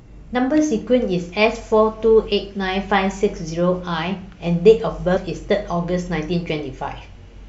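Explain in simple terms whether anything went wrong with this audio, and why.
Something did go wrong, briefly, in this speech clip: from about 5.16 to 5.18 s there's a quick glitch caused by damaged data in a compressed stream. A tiny stretch of the compressed file got corrupted, so the decoder couldn't make sense of those bytes. It lost its place and had to hunt for the next clean frame to pick up from. You hear that stumble as a short chirp or blip.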